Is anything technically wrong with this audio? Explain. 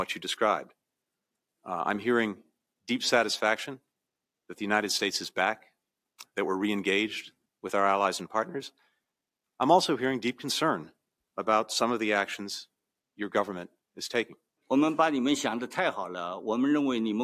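No, nothing technically wrong stood out on listening to this audio.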